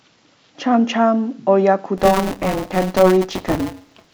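From 1.97 s to the end of the clip, the program filling the playback ring buffer and the hardware draining it have slipped out of step, so the two positions cross inside every period. This is buffer tearing. About a fifth of each buffer replays speech from roughly 20 ms earlier, with hard joins on both sides. The result is a steady robotic buzz at 188 Hz, which fits a 256-sample buffer, and it rides on the speech wherever there is signal.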